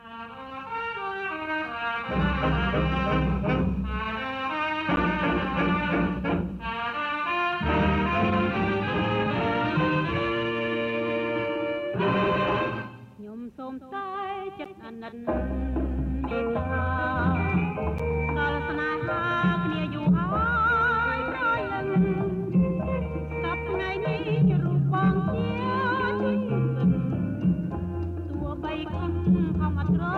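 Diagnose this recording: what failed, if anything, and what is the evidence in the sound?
A block of digital silence about 10.7 ms long cuts in at 4.96, 14.65 and 17.98 s, each heard as a tick. This is a buffer-stage underrun, and the length fits an unfilled 512-sample buffer. The waveform shows a flat near-silent run with sheer edges, and the spectrogram shows a thin broadband stripe.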